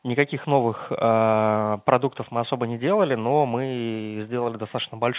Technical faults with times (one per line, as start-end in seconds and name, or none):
none